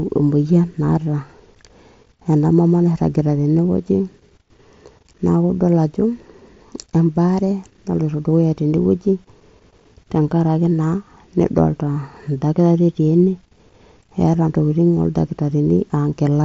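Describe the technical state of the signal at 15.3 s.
At 15.3 s the speech is intact, with no dropout, click, distortion or other fault, and it carries only the band limit at 8 kHz and the light grain on louder sounds that come with the mSBC Bluetooth headset link it passes through.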